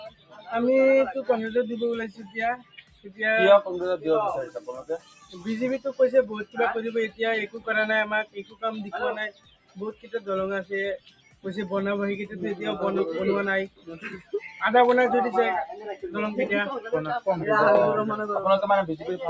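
A noise suppressor built for speech has been left running on sound it wasn't designed for. It keeps treating held, steady parts and their tails as noise, so the level swings by roughly 15 dB, pumping and thinning while attacks punch through, all on top of call-style mic processing that tops out around 8 kHz. The sound cut by the noise suppressor is clearest at 0–0.52 s, 2.1–3.21 s, 4.47–5.47 s, 6.45–7.68 s, 8.24–11.45 s, 13.67–14.62 s and 15.73–16.09 s. In those stretches, sustained material sinks by about 15 to 18 dB or gets its decay chopped short.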